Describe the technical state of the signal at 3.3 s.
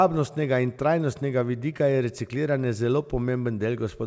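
At 3.3 s the speech is intact, with no fault at that moment, only the band limit of the call path, with nothing above about 8 kHz, consistent with a G.722 call at around 64 kbps.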